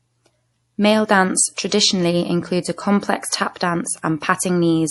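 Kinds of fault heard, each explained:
MP3 compression: Throughout the speech the sound has a plainly audible watery, swirling quality, and nothing is left above 11.5 kHz, so the top end is cut flat. This is likely MP3 encoding starved of bits, which fits a low bitrate around 48 kbps. The encoder drops the treble at a fixed frequency and zeroes weaker frequency lines that flicker on and off between frames, which causes the swirl and softens consonant edges.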